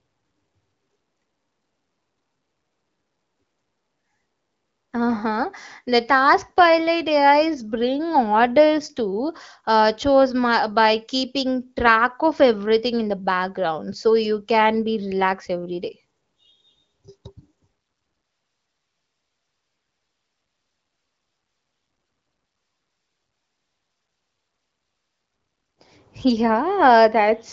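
Nothing goes wrong anywhere in this speech; it simply carries the light, expected character of the AMR wideband (HD Voice) codec, with the top end stopping near 7.5 kHz, which fits its 15.85 kbit/s mode.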